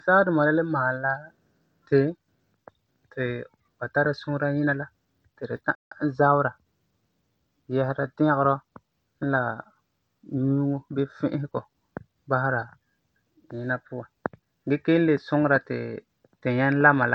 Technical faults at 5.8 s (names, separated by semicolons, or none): Bluetooth SBC compression; playback stall